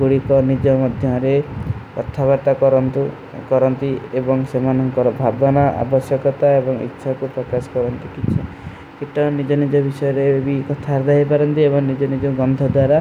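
No technical faults are audible anywhere in the recording.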